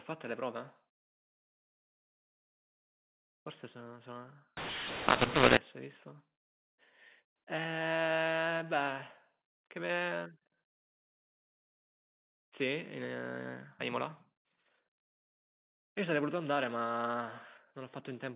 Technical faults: mu-law and A-law mixed up

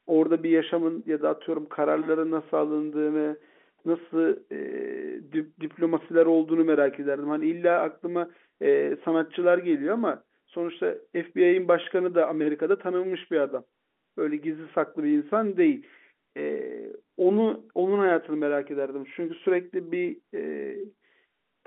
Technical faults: none

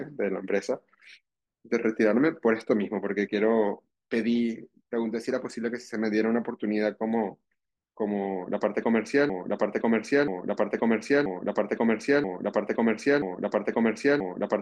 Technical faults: broken-record loop

